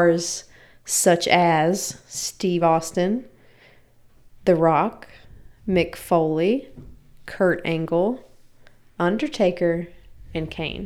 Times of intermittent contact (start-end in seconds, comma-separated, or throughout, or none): none